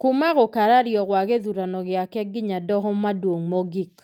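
No audible faults occur anywhere in this recording.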